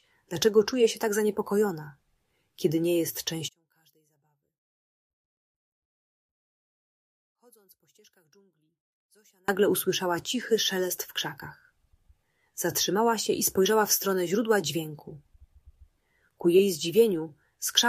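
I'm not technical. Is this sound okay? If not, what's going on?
No. From 3.48 to 9.48 seconds the sound almost vanishes but leaves a faint trace, unlike a dropout's silence: likely one channel inverted, cancelling when mixed to mono.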